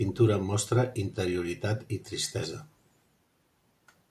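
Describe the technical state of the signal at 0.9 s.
Nothing is wrong with the signal at 0.9 s; the audio is intact at that point.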